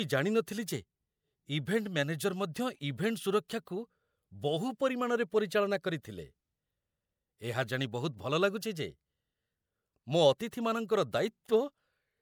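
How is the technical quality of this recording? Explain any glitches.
The recording has two brief pre-echo glitches. At 0.46 s and 3.48 s, the transform codec spread quantisation noise ahead of a sharp speech attack, producing roughly 11 and 13 ms of hiss that smears the onset.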